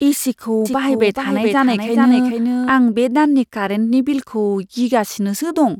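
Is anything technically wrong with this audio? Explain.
Yes. From 0.65 to 2.69 s, just before "आं बे दाननि कारेन्टनि", a doubled audio track appears: a full-band copy trails roughly 0.4 s behind, about 5 dB quieter, likely from a second capture path. It starts and stops abruptly, showing as a shifted duplicate of the spectrogram and waveform.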